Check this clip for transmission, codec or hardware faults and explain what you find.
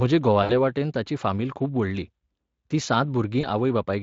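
Two short dropouts show VoIP packet loss concealed by the speech codec, from 0.43 to 0.52 s and from 3.41 to 3.46 s. About 60 ms and 20 ms of signal are missing, which fits three lost 20 ms frames and then one. Across each gap the decoder extends its last pitch and filter at falling gain. The speech smears into a fading buzzy tone or coloured noise and stays weak briefly afterward while the Speex decoder state recovers.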